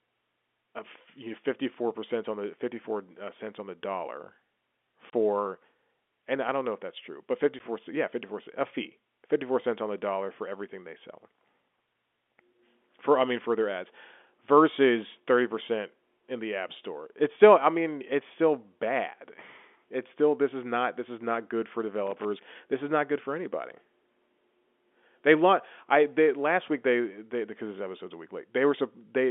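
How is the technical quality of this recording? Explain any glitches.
The recording has two kinds of glitch: brief dropouts and one burst of crackle. It comes through a telephone line with G.711 coding, so the band is narrow, roughly 250 Hz to 3.5 kHz.

Packet loss filled with silence occurs twice. At 5.10 s a gap opens for 30 ms and closes at 5.13 s. At 7.59 s, just after "if that's true but", there is a shorter 10 ms hole. The receiver got no audio for those moments and played silence instead. The gap lengths fit a 10 ms packet size, so three packets were lost at once and then one. The sound stops dead and restarts.

Loose connector crackle appears from 22.07 to 22.25 s, right after "is not good for". It lasts under a fifth of a second. A contact in the chain is making and breaking rapidly, probably a worn or dirty plug shifting in its socket. Each break chops the signal, and any DC on the line turns those breaks into pops. 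The result is an irregular, scratchy burst laid over the sound.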